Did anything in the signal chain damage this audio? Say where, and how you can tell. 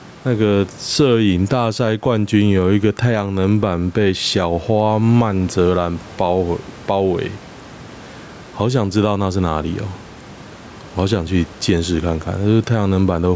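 Yes. Gain pumping runs through the whole clip, likely from microphone gain set far too high, so a fast limiter clamps every loud syllable. The gain swings by about 10 dB as it is pulled down under speech. The waveform looks flattened.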